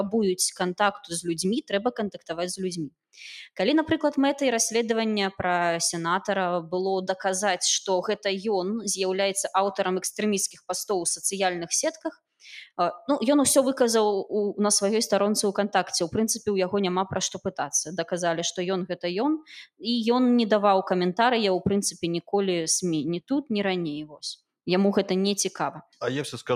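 From 2.12 to 2.3 s, the sound is cut by the noise suppressor. The suppressor mistook this stretch for background noise and pulled it down. The level falls by up to about 18 dB. Roughly 150 ms of sound sinks in level before recovering.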